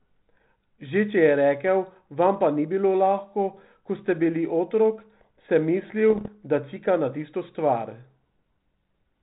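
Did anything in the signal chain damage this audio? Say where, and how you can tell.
Yes. Pops and rough, level-jumping bursts from 6.10 to 6.29 s are bit errors on the ADPCM link. Each flipped bit throws off the decoder's step size and predictor.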